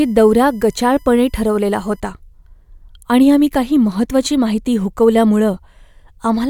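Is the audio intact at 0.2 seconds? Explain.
No. At 0.2 seconds the speech carries USB whine, which runs from the start to 2.0 s. The USB bus draws current in regular 1 ms frames, and that pulsing leaks into the audio through the power or ground. The result is a steady, fixed-pitch whine built on 1 kHz, strongest at its harmonic near 13 kHz, sitting roughly 40 dB below the speech as a thin, high, constant tone.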